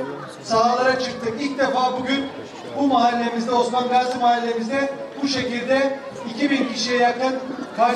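No audible technical faults anywhere in the audio; nothing to flag.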